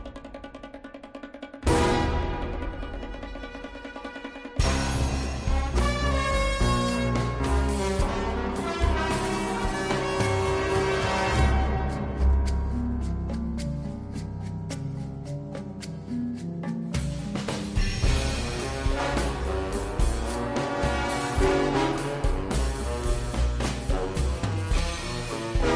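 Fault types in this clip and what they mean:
Wrong sample rate: everything runs at about 0.69 times normal speed and drops roughly 6.5 semitones, which fits 32 kHz audio played back at 22 kHz.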